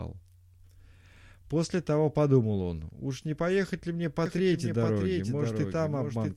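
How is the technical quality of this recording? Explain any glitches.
From 4.26 s to the end, the speech is joined by a second copy of itself trailing roughly 0.7 s behind and a few decibels quieter, at about 5 dB down. The copy switches on abruptly rather than fading in, and it carries no decay or room colour. This is a doubled audio track, likely from the same signal reaching the mix twice, once through a slower path, so two identical full-band copies overlap out of step.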